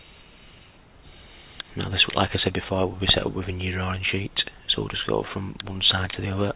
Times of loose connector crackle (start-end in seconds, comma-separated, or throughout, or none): none